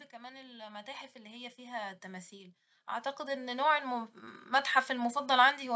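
Automatic gain rising runs through this speech recording from 0.1 to 2.62 s and again from 3.16 to 5.2 s, as the gain control judges the input too quiet and ramps its gain up, by about 11 dB and then about 7 dB, so voice and background swell together.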